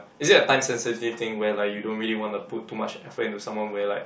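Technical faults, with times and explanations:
No technical faults are audible in this speech recording.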